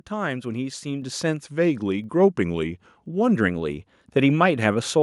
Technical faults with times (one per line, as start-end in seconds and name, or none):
1.02 microphone volume stepped up
1.44-3.35 drift correction step